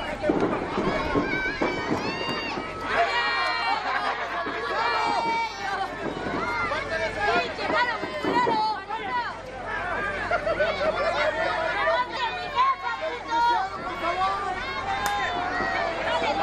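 At 3.62 s and again at 12.17 s the sound jumps ahead, skipping about a tenth and then nearly a third of a second, likely a dropped buffer (overrun).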